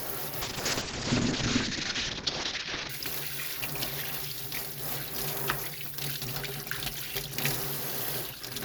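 A call bitrate drop hits this everyday-sound recording from 0.42 to 2.95 s. The encoder is starved of bits, which fits a fall from around 128 kbps to about 6 kbps. The sound turns coarse and watery, and the bandwidth narrows from 20 kHz to 8 kHz, muffling the top end.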